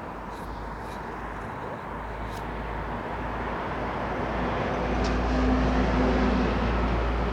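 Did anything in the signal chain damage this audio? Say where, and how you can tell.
Yes: a sample-format conversion likely truncated the audio to 10 bits without dither, leaving grainy, signal-following distortion about 45 dB down, grittiest in quiet passages throughout.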